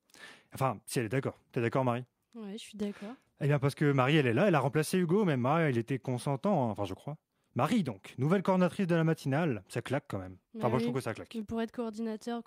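No technical faults are audible anywhere in this speech recording.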